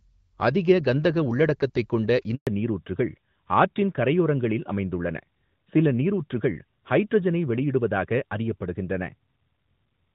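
At 2.35 s a handover gap silences the speech for 120 ms as the call switches networks. The voice dies away within a few tens of milliseconds and resumes at 2.47 s. From 2.47 s to the end, a fallback to narrowband strips everything above 4 kHz, which points to an older narrowband codec replacing the lightly coded HD Voice stream. The speech sounds duller and rougher from there on.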